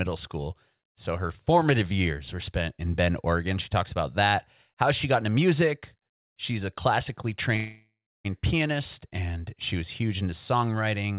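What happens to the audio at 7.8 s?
At 7.8 s the sound is inside a call audio freeze running from 7.56 to 8.27 s. The last sound stretches into a fading buzz that sinks to near silence for about 0.3 s, then the audio resumes exactly where it broke off, now running about 0.68 s late. The likely cause is packets held up in transit until the jitter buffer ran dry. Unlike a packet-loss dropout, nothing is lost; a gap is inserted instead.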